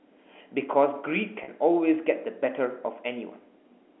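At 1.44 s, a 40 ms stretch of the speech drops out, ending near 1.48 s. This is packet loss with pitch repetition. The receiver repeats the last pitch period to fill the gap, fitting two lost 20 ms packets. It sounds like a brief, slightly buzzy held tone inside the narrow telephone band.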